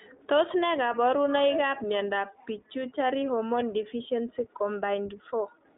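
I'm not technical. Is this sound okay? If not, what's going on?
No. The speech went through the iLBC codec, a phone-call format that squeezes it into 20 ms chunks and keeps only roughly 300 Hz to 3.7 kHz, so throughout it sounds muffled, rough and slightly robotic.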